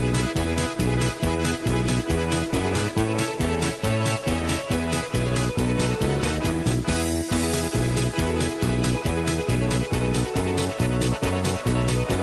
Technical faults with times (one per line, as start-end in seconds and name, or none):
none